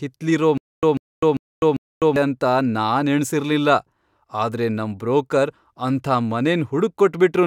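The playback likely stalled from 0.58 to 2.16 s, replaying its last fragment at each retry and then running dry. This is a stutter with silent gaps: a 143 ms burst of speech repeats four times, every 396 ms, with 253 ms of digital silence between, before "ಅಂತ ನಾನ್ ಎಣ್ಸಿರ್ಲಿಲ್ಲ" arrives.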